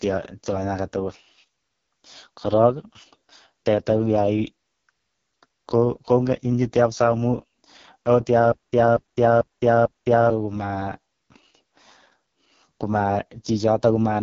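AMR wideband (HD Voice) codec, throughout: the speech sounds rough and raspy, and nothing reaches above about 6.9 kHz. The codec models the vocal tract with pulse excitation and fills the top band with shaped noise. The heavy damage fits its lowest 6.6 kbit/s mode.

Stutter with silent gaps, 8.52 to 10.30 s: a 237 ms fragment repeats four times, each followed by 208 ms of digital silence, at an even 445 ms period. The player or stream likely stalled and replayed its last buffer on each retry, so the audio meant for that span is lost.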